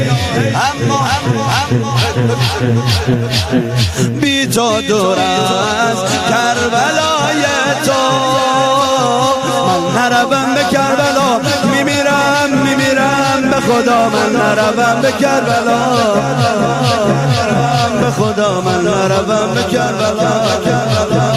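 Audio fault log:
Throughout, gain pumping: the gain swings by around 20 dB, so loud and soft passages sit close in level and the sound is squashed. Likely gain set too high, with a fast limiter clamping every peak.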